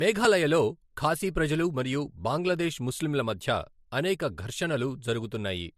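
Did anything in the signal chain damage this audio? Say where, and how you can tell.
Yes, at the codec stage, right through the speech. Nothing comes through above 14.2 kHz, and there are layered codec artefacts, older ones heard together with newer ones. That likely points to transcoding between lossy codecs, something like low-rate MP3 re-encoded to AAC-LC, each pass piling its damage on the last.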